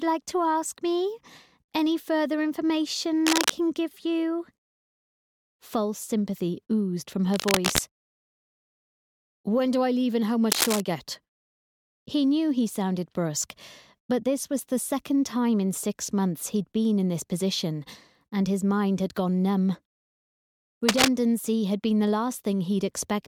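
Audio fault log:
3.27–3.58 s, 7.33–7.79 s, 10.52–10.80 s, 20.88–21.08 s, cable scratch noise: brief bursts of dense, uneven scratching and rustling over the sound, roughly as loud as it, the last one louder. The likely cause is a worn cable or connector being moved, its contact resistance changing rapidly.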